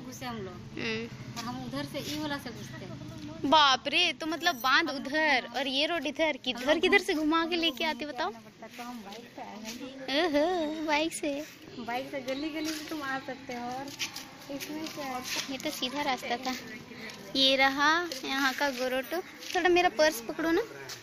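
From start to finish a filter restarted on every block, beginning each 20 ms block from silence, so a small transient opens each one. The result is a ticking 50 Hz buzz that rises and falls with the signal's level, unlike steady mains hum, which persists through quiet passages.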